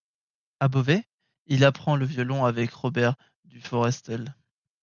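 No technical faults can be heard anywhere in the recording.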